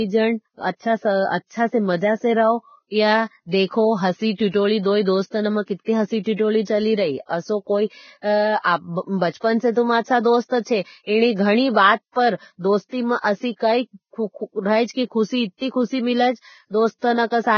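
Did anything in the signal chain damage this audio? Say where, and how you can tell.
Yes, most likely heavy Vorbis compression at the codec stage: a low bitrate throughout leaves nothing above 6.6 kHz and turns the remaining treble into grainy, hissy noise.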